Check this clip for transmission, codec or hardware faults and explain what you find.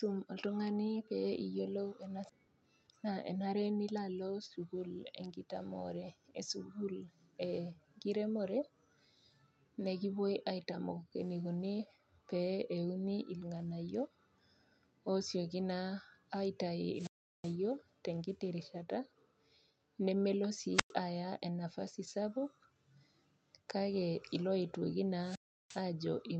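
Three kinds of fault are audible in this speech: a skip ahead, a jitter buffer speed-up, and three wireless microphone squelch dropouts. The audio passes through a call codec limited to about 8 kHz, consistent with Opus.

At 2.29 s there is a skip ahead. Roughly 0.4 s of audio was dropped. The speech jumps forward with no gap.

From 2.39 to 4.00 s comes a jitter buffer speed-up. The buffer trimmed pitch periods to shed about a fifth of a second. Speech runs 113% fast at unchanged pitch.

Squelch dropouts occur at 16.94 to 17.56 s, 20.73 to 20.93 s, and 25.20 to 25.84 s. The radio signal fades, hiss rises, and the receiver mutes for about 372, 107 and 351 ms.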